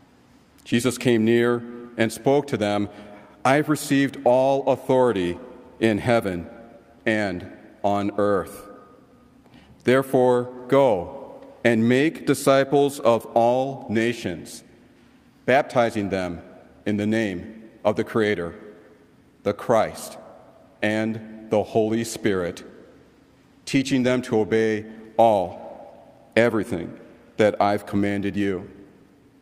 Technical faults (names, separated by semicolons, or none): none